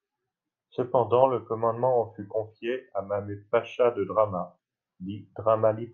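No technical faults can be heard anywhere in this recording.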